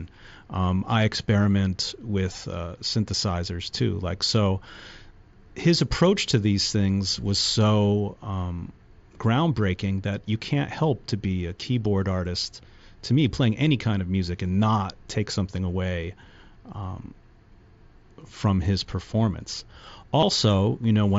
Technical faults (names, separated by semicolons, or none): concealed Bluetooth headset packet loss